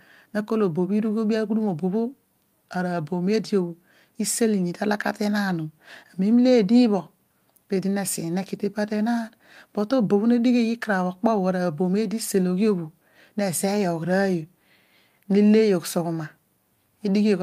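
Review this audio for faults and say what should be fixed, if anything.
No faults turn up in this audio, so nothing needs to be fixed.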